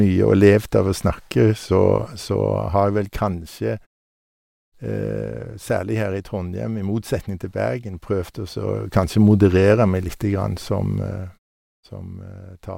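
Nothing in this speech recording stands out as a technical fault; any shifts in level and the quiet stretches between phrases come across as ordinary handling rather than anything going wrong.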